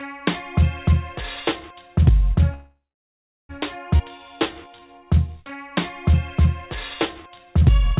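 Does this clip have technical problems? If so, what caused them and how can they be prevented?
Yes. From 2.54 to 3.51 s there is a call audio freeze, most likely because packets were held up in transit and the jitter buffer ran dry. With nothing new to play, the receiver stretched the last sound into a fading buzz or hiss that then falls silent for about 0.72 s of the 0.95 s hold. When the packets finally arrived, playback resumed where it had stopped, so nothing is lost but a gap now sits in the audio. Preventing it means giving the connection steadier routing, or a larger jitter buffer margin, so delivery stalls don't drain the queue.

At 3.97 to 4.01 s the audio skips ahead: a stretch of roughly half a second was discarded, either lost in transit or dropped when the jitter buffer overflowed. Playback jumps straight from before the cut to after it, bridged by only about 22 ms of filler, so the two sides are joined almost directly and the missing half-second simply never plays. 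A buffer that drains a backlog gradually by time-compression, rather than discarding whole chunks, would avoid this.

Two jitter buffer slow-downs follow, from 4.18 to 5.71 s and from 7.18 to 7.91 s. In each, the buffer was running low or had just raised its target delay, and rebuilt its reserve by repeating single pitch periods and pause fragments over and over. The first runs at about 87% speed, adding 208 ms; the second at about 92%, adding 64 ms. The pitch stays put, but sounds are drawn out. Steadier packet arrival, or a buffer that starts with enough delay, would reduce how often it has to stretch.

The G.711 mu-law call path itself is audible as its usual coding noise and the expected cutoff, with nothing above 4 kHz.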